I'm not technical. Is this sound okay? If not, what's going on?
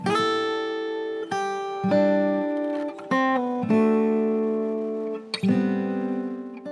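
Yes, this sound is okay. There's nothing wrong with it that a listener would notice.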